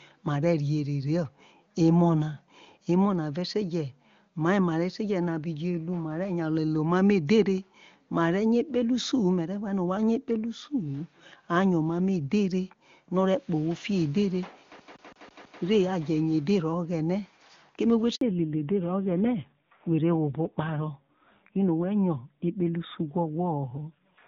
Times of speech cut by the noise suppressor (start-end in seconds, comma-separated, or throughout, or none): none